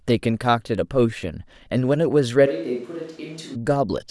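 From 2.48 to 3.54 s the speech suddenly goes roomy, thin and about 10 dB quieter, with more background noise: likely a switch to a distant microphone.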